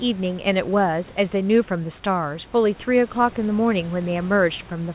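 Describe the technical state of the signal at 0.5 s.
At 0.5 s the signal is intact, with nothing more than the room noise well below the speech and the narrowband sound of the call path, which carries nothing above 4 kHz.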